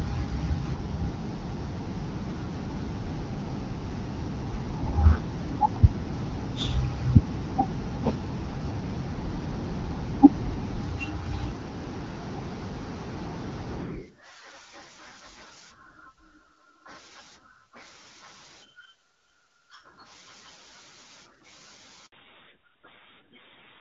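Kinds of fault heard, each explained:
Handover gap: The call switched networks and no speech frames arrived. The sound dies away at 22.06 s and stays silent for about 60 ms.
Fallback to narrowband: After the gap, from 22.12 s to the end, nothing remains above 4 kHz. The speech turns duller, which fits a drop from AMR-WB to AMR-NB.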